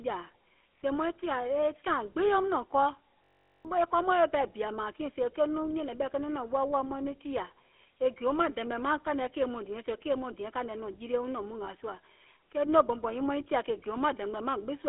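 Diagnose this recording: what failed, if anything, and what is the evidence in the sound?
The codec stage shows GSM full-rate coding throughout this speech clip. Every voice sounds buzzy and gravelly, as if pushed through a coarse pulse-excited vocal-tract model at what sounds like 13 kbps. A spectrogram shows a hard ceiling near 3.8 kHz, and harmonics look grainy and smeared.

At the driver or buffer stage, a system hang loop runs from 3.24 to 3.65 s. The host stalled while the hardware kept cycling one 21.33 ms buffer, which fits 1024 samples, repeated 19 times. This gives a steady 46.9 Hz buzz and loses about 0.4 s of audio. The waveform shows identical repeating segments.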